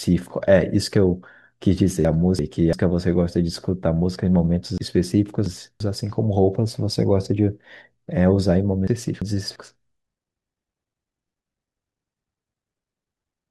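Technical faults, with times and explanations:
2.05–2.73 s, 4.78–5.80 s and 8.88–9.56 s, chunks out of order: in each span, a chunk of about 341 ms plays after the chunk or chunks that should follow it. It is one place late in the first and third spans and two places late in the middle one. Nothing is missing, but the speech jumps back and forth and sounds jumbled, with three hard joins in each span. A spectrogram shows formant tracks that break at each join and resume out of sequence. The waveform shows abrupt breaks at the joins.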